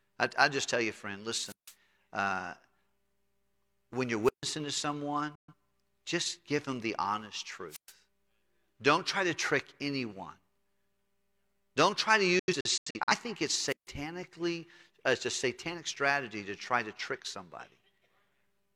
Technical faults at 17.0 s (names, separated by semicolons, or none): none